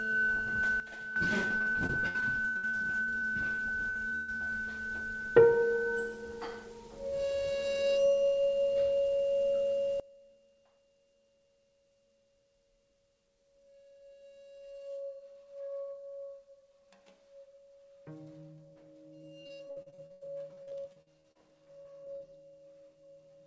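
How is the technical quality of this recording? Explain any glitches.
The recording has clear technical problems: two abrupt drops in level and two stretches of choppy, robotic-sounding dropouts. The band stops at about 8 kHz, which fits a wideband call codec such as G.722.

Sudden gain jump: at 0.8 s the sound and its background noise fall together by about 10 dB, holding low until 1.16 s. At 10.0 s they drop by about 23 dB and stay down to the end. Both are step changes with no fade, likely a digital gain setting applied instantly rather than ramped.

Repeated packet loss (robotic sound): from 1.48 to 4.54 s, and again from 19.22 to 22.22 s, the audio stutters with a robotic quality and small pieces missing. Each stretch has 24 gaps where packets never arrived. The receiver filled each one by stretching the last sound it had, covering roughly a quarter of each stretch. The longest holes are 129 ms in the first stretch and 93 ms in the second.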